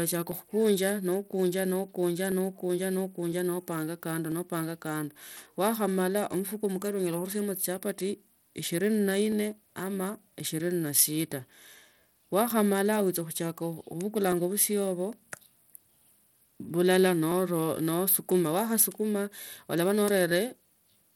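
A speech recording with two problems. Throughout, the treble is thin and flickery with a gritty edge, most likely Bluetooth SBC compression, consistent with a low bitrate around 96 kbps. There are also periodic USB or driver dropouts: a tiny tick every 1.0 s from 0.32 s to 20.31 s, about twenty in all, each a skipped sliver of roughly half a millisecond.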